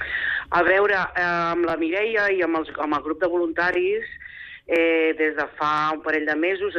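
A click repeats at 0.68–0.70, 1.70–1.72, 2.72–2.74, 3.74–3.76, 4.76–4.78 and 5.78–5.80 s. These are overlapping chunks. The audio was handled in 1.0 s pieces, and each piece began 20 ms early, so that slice plays twice. Each join gives a brief stutter.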